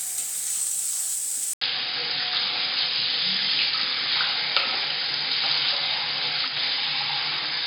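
Everyday sounds; at 1.53 s an 80 ms gap, then duller audio with nothing above 5 kHz, a new noise floor and a level shift of about 5 dB, likely an input switched to a poorer device.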